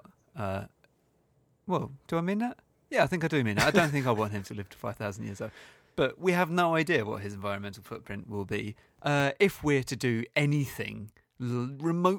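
A speech recording with nothing technically wrong with it.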